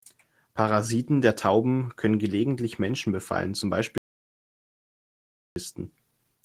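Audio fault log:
3.98–5.56 s, audio dropout to silence: Right after "befallen zum", the speech stops mid-flow. For about 1.58 s there is total silence, with no room tone at all. Then the speech returns abruptly. A gap this clean is lost input, not a quiet passage. The input was likely lost through a disconnected device, a failed link or a stray mute, while the recorder kept writing silence. Whatever was said in that stretch is missing.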